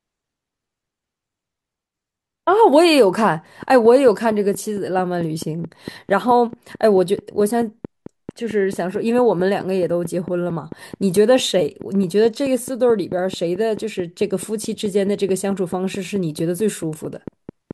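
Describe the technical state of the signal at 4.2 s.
At 4.2 s a train of clicks is running, likely from nearby interference or a faulty connection or power supply injecting a pulse 4.55 times a second, from 3.63 s to 17.72 s. Around seventy evenly spaced, similar clicks peak about 5 dB above the speech, ticking through pauses too.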